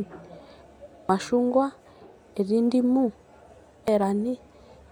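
A brief blip breaks into the speech at 1.09 s and again at 3.88 s. Both are damaged data in a compressed stream: corrupted bytes make the decoder misread frames, lose sync and hunt for the next valid frame header.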